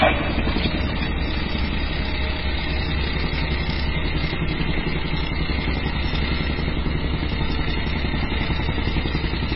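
Sounds, throughout with nothing above 5.5 kHz and a watery, swirling smear, likely heavy MP3 compression at a very low bitrate around 16 kbps; the swirl rules out a plain low-pass filter.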